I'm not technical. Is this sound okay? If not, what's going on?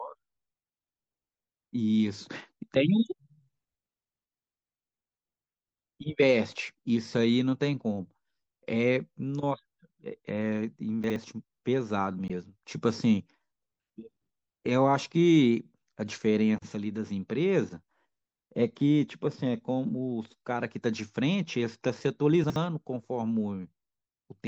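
No. Chunks out of order at 11.04 and 22.44 s: a 60 ms piece plays one chunk late, so the sound briefly jumbles.

Damaged data in a compressed stream at 12.27 s: part of the file is corrupted, so the player loses its place and gives a short chirp or blip.

MP3 compression throughout: the speech sounds watery and swirly, likely from heavy compression that discards detail to save space.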